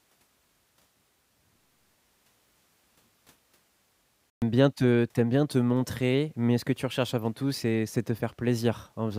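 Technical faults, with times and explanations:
4.30 to 4.42 s, playback stall. The speech cuts to silence for 120 ms, then resumes just before "bien te tu aimes". The gap lands mid-flow, not at a natural pause. The player likely ran out of data or was briefly blocked.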